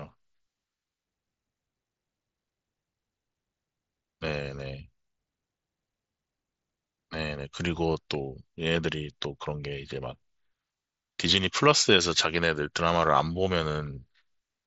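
No technical faults are audible.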